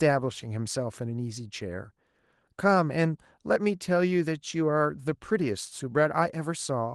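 No technical faults are audible in this speech.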